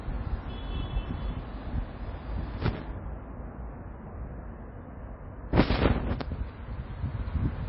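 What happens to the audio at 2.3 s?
At 2.3 s, as throughout, the sound has nothing above 5.5 kHz and plainly audible watery, swirling artefacts, likely from MP3 compression at around 24 kbps. Unlike a simple low-pass filter, weak frequency components flicker on and off from frame to frame.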